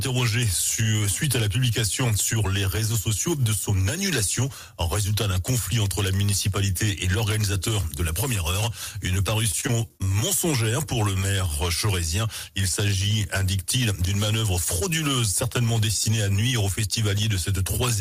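From 9.51 to 10.24 s, repeated packet loss (robotic sound) breaks up the audio. A rapid run of short holes, none longer than 24 ms, is patched by extending the preceding sound for about 110 ms in total while 40 ms is lost outright, leaving a choppy texture.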